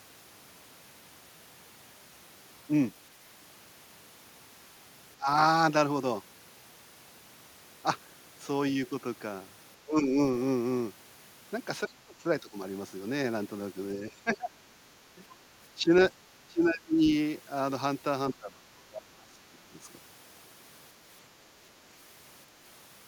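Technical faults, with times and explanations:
5.17 to 19.75 s, speech suppressed in double talk: the talker ducks at 5.17–5.28, 9.83–10.19, 11.88–12.57, 14.08–14.79, 15.15–15.23, 15.75–15.91, 16.47–17.08 and 18.32–19.75 s, dropping roughly 10 to 30 dB for anywhere from a brief moment to about a second. That's likely the echo canceller mistaking overlapping far-end talk for echo and turning everything down.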